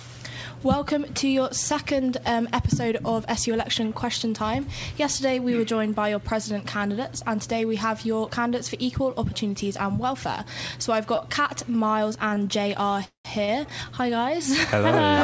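At 11.16 to 11.20 s, then 12.29 to 12.33 s and 12.35 to 12.38 s, a short stall from a late packet holds the sound for about 20 ms while the jitter buffer is empty, then resumes with nothing lost, leaving a brief drawn-out buzz. From 13.04 to 13.27 s, a call audio freeze stretches the last sound into a fading buzz for about 200 ms, including roughly 120 ms of silence, likely because delayed packets drained the buffer. Playback then picks up where it stopped. A final stall at 13.45 to 13.50 s holds the sound for 30 ms. Throughout, the band-limited G.722 sound stops at 8 kHz.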